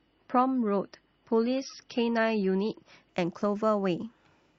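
From 0.0 to 3.09 s the speech sounds dull, with nothing above 5.9 kHz and strong codec artefacts. This is an adaptive stream starting at a low bitrate, consistent with 24 kbit/s MP3. At 3.09 s quality jumps gaplessly, fitting 128 kbit/s.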